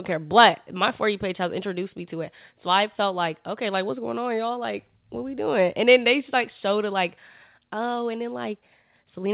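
No audible technical faults.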